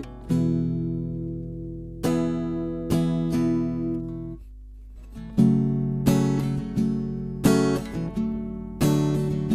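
Throughout, a 50 Hz buzz rides on the signal: a resampler restarted on every block leaves errors at each 20 ms edge, seen as regular vertical spectrogram lines.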